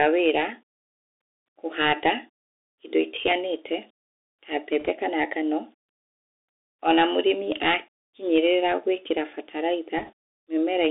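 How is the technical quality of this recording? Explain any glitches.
The technical quality is poor: the whole recording has plainly audible narrowband headset coding, and two brief bursts of crackle break in later.

Bluetooth CVSD headset codec, throughout: a one-bit coder tracks the waveform with adaptive up-down steps, which fits a 64 kbps link. The sound is confined to roughly 250 Hz to 3.7 kHz, with granular hiss beneath it, scratchy s sounds, and distortion where loud high content outruns the step.

Bit errors on a Bluetooth voice link, at 4.80 to 4.89 s and 9.97 to 10.12 s: flipped bits, around 1 percent and then 1.5 percent, nudge each step slightly wrong. Because no single bit carries much weight and errors fade out, these come through as rushing crackle rather than sharp clicks.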